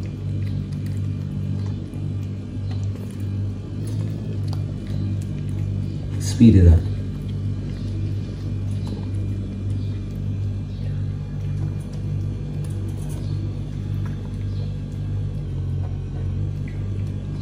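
From 3.8 to 4.35 s the sound runs 6.2% fast and about a semitone sharp. From 15.45 to 16.39 s it runs 6.2% slow and about a semitone flat. Each time it snaps back afterward. This is a drift correction step, likely a clock-matching stage changing playback rate abruptly.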